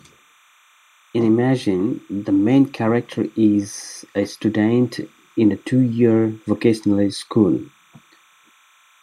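From start to finish there's timecode bleed under the speech. Linear timecode from a nearby track or cable is leaking in, a square wave flipping between roughly 1 and 2 kHz, which fits 29.97 fps code. It sits about 35 dB down as a faint, steady chirping warble.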